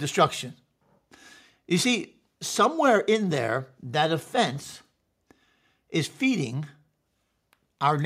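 Nothing in the recording stood out as a technical problem on listening.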